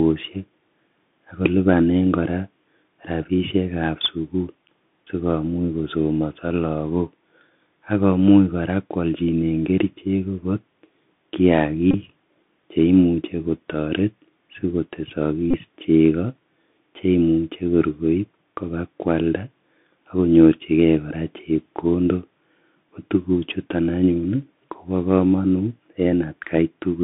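The whole clip carries Bluetooth CVSD headset codec damage. The band runs from 150 Hz to 3.6 kHz. S sounds turn scratchy over a granular hiss. This fits a 64 kbps headset link.

Bluetooth headset packet repeats follow at 11.91–11.94 s and 15.51–15.56 s. Lost packets were replayed, each making a short buzz near 267 Hz.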